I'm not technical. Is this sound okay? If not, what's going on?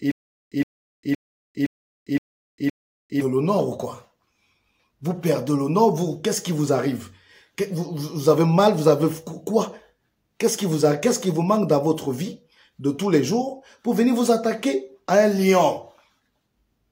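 No. From the very start until about 3.21 seconds there is a stutter with silent gaps, most likely because the player or stream stalled and kept retrying. Each retry replayed the same short scrap of about 0.12 seconds and then ran out, leaving roughly 0.4 seconds of dead silence. So you hear that same tiny burst six times, evenly spaced about half a second apart, and whatever should have played during those gaps is simply missing.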